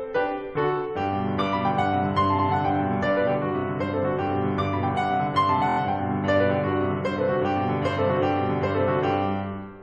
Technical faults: repeated frames

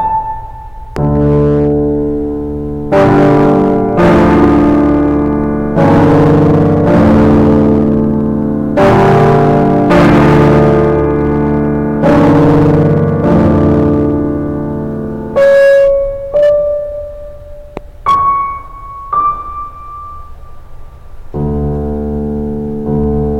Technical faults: hard clipping; loud pop

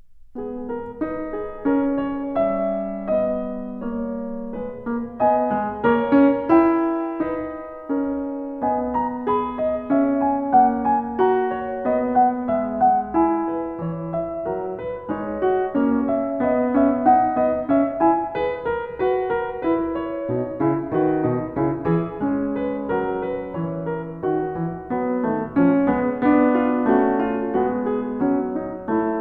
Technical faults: none

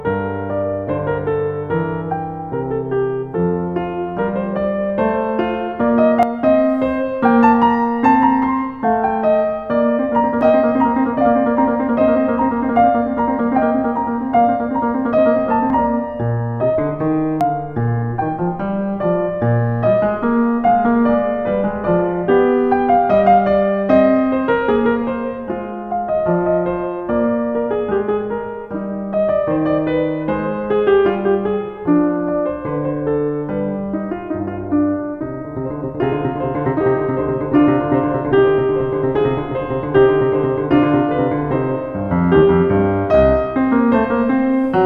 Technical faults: dropped buffer (overrun)

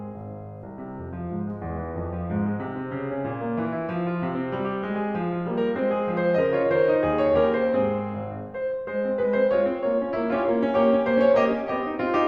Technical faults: none

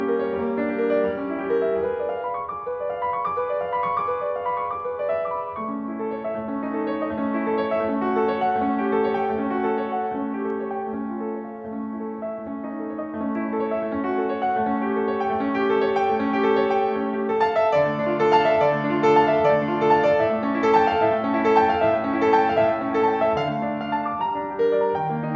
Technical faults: none

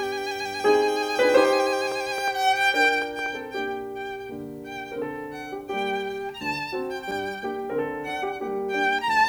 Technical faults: train of clicks

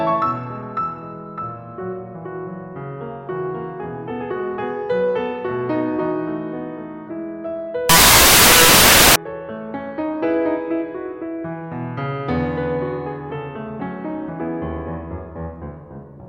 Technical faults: samples built from the wrong bytes

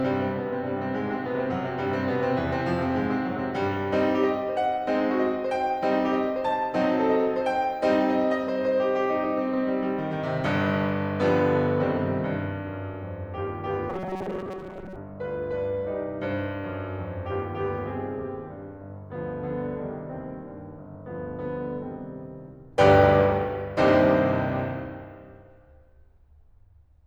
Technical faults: robotic sound from repeated short buffers

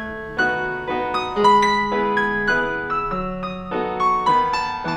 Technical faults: audio read two samples at a time (double speed)

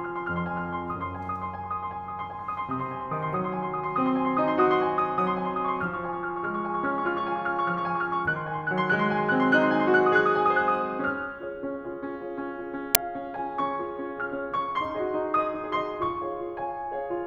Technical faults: file tags played as audio

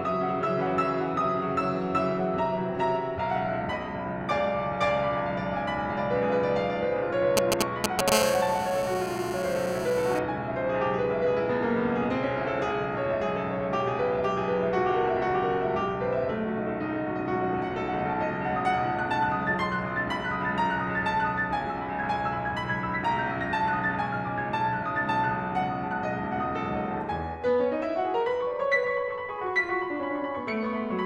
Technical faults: GSM signalling bursts; GSM phone buzz

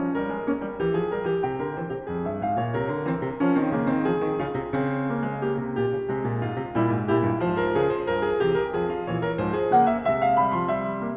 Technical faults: none

